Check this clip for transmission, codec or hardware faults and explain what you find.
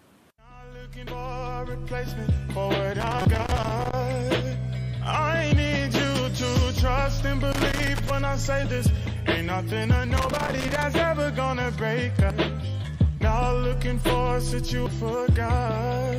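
Two kinds of fault occur: damaged data in the compressed stream and a loose connector crackle.

Brief chirps and blips occur at 1.07 s, 3.22 to 3.25 s, 5.49 to 5.52 s, 12.30 s and 14.86 s. These come from damaged data in the compressed stream. The decoder hits corrupt frames, loses sync and skips ahead to the next valid frame header.

Irregular scratchy crackling runs from 3.00 to 3.93 s, 7.52 to 8.10 s and 10.17 to 10.83 s. This is loose connector crackle. A worn or dirty contact rapidly breaks and restores the signal, chopping the audio into bursts of crackle.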